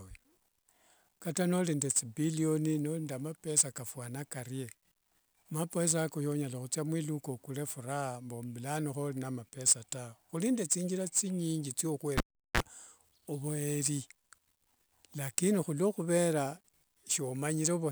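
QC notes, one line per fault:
12.18–12.60 s, cable pulled and plugged in: after "nende thinjira thinyingi" a pop cuts the speech to near silence for 378 ms, then a 31 ms burst of 60 Hz mains buzz as only the tip makes contact, and a second pop as the signal returns.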